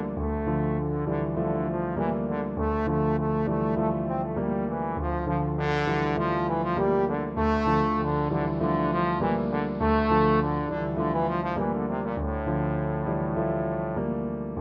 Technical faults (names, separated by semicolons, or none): digital radio blending to analogue